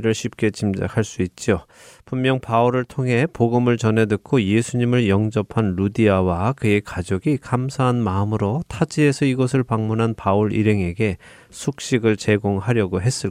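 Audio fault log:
No fault is heard anywhere in the speech. There is nothing to log for this clip.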